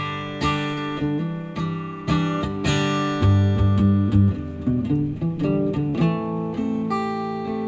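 A call recording with two spots of short concealed packet loss, at 0.74 to 0.80 s and again at 5.90 to 5.97 s. Each time roughly 30 ms of audio didn't reach the receiver in time, so it papered over the hole by stretching out the last bit of sound and then blending back into the real signal, which you hear as a quick smear or wobble. The audio tops out around 8 kHz, which fits a G.722 call codec.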